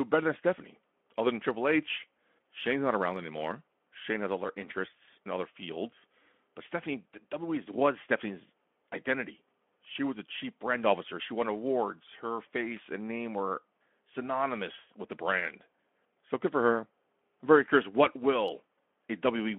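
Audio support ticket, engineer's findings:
No faults found in this speech recording. The Speex path is audible as a telephone band of 200 Hz to 3.4 kHz with light codec colouring, which fits a mid-range setting near 15 kbps.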